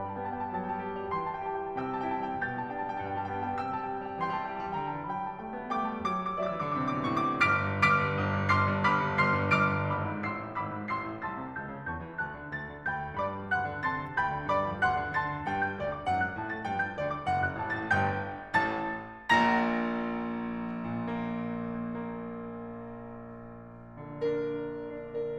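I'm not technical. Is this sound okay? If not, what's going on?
Yes, it sounds fine: nothing in this music stood out as a problem when listening to it.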